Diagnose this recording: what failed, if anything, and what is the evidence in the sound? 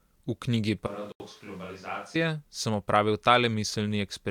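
From 0.87 s to 2.15 s the speech goes hollow and roomy, loses bass, drops about 10 dB and sits on room noise around 20 dB down. That's a switch to a distant microphone, likely the close mic's analogue feed dropping out, with the switch and return both abrupt.

Inside that stretch there's a block of digital silence at 1.12 to 1.20 s, an 80 ms hole that cuts out and back with no fade. That points to the driver or buffer stage: the output buffer wasn't filled in time, so zeros went out instead.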